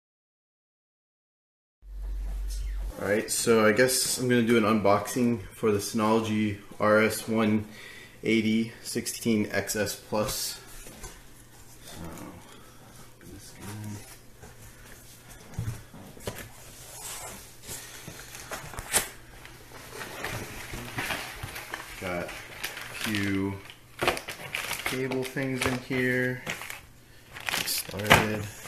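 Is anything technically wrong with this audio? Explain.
Yes. Frames out of order occur at 2.61–2.66, 9.13–9.24, 22.53–22.59 and 27.88–27.93 s: two adjacent blocks, 23.2 ms each (46.4 ms at 9.13 s), were decoded swapped. Each stretch plays with its halves exchanged, a brief garbled flutter, with no time lost.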